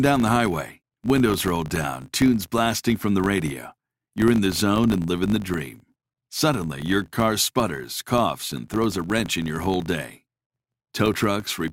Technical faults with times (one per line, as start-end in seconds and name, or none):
0.00-11.73 filter restarted on every block